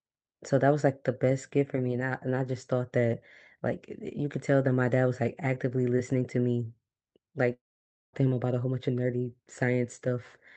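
From 7.53 s to 8.15 s the speech breaks off: the last sound carries on briefly as a fading buzz, then roughly half a second of silence follows before the speech resumes with about 600 ms of material gone. This is most likely a long network dropout, with the receiver concealing the missing stretch by extending and fading the last audio, then muting. The call path adds its coding noise and a band limit near 8 kHz.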